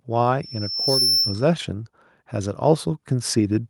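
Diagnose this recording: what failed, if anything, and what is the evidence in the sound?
An acoustic loop formed between loudspeaker and microphone. At 5.4 kHz the round-trip gain exceeded one, so that frequency fed on itself. This loudspeaker feedback squeal runs from 0.42 to 1.52 s: a pure tone swelling over roughly half a second to about 5 dB above the speech.

In the call processing, the automatic gain control judged the input too quiet and began raising its gain step by step. From 2.33 s to the end, the automatic gain rising is heard as the speech and the background swelling together.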